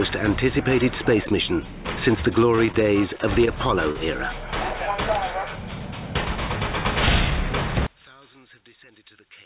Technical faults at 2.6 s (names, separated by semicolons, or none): short stall from a late packet